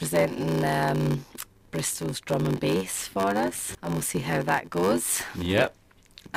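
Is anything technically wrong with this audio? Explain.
Yes. Throughout the clip a steady buzz at about 93.8 Hz sits under the sound, which plays back slowed to 0.861 of its normal speed while keeping roughly its normal pitch. This is a block size mismatch (padded): one stage hands over blocks shorter than the next stage reads, which fits a 512-sample read block, and the shortfall in each block is filled with silence. Those regular gaps cause the buzz at the block rate and stretch the timing.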